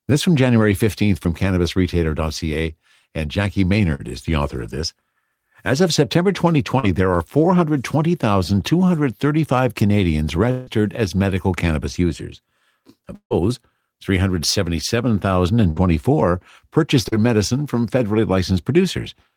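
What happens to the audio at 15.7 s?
A burst of packet loss from 15.70 to 15.78 s: the receiver stretches and fades the last speech for about 60 ms, then resumes with 60 ms skipped.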